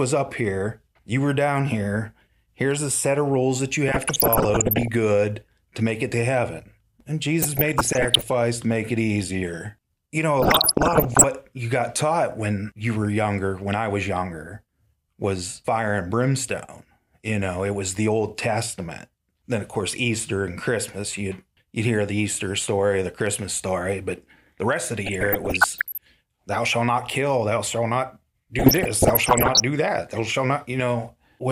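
DAB burbling breaks into the speech five times: 3.88 to 4.88 s, after "of rules that you"; 7.42 to 8.32 s, before "to make it easier"; 10.40 to 11.24 s, after "know a"; 25.04 to 26.05 s; and 28.59 to 29.60 s. Bit errors slip past error correction into the MP2 data. Corrupted samples put short blips of noise in single sub-bands, and corrupted scale factors make sub-bands jump in level for up to a frame. The final burst carries the heaviest errors.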